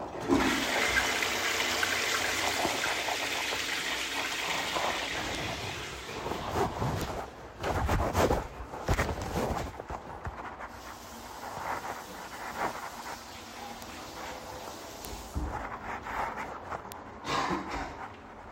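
Bit error spikes at 5.35, 7.01, 8.94, 13.82, 15.05 and 16.92 s tick sharply through this sound recording, peaking around -16 to -10 dBFS, as flipped bits make single samples or short runs jump by a power of two and back.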